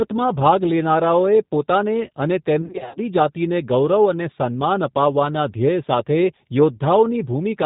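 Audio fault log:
throughout G.729 codec: the speech is cut off above 4 kHz and has a slightly rough, synthetic edge, plainly audible, which fits an 8 kbit/s G.729A stream rebuilding each frame from a vocal tract filter and pitch predictor. Unlike wideband codec smearing, the top band is simply missing.
2.62–3.00 s VoIP packet loss concealed by the speech codec: about 220 ms of speech is missing, scattered over 340 ms in runs of up to 50 ms. The decoder fills each gap by stretching the last pitch and filter into a fading buzzy tone or coloured noise, and the speech stays weak briefly afterwards. Unlike plain dropouts, the gaps hold sound rather than silence.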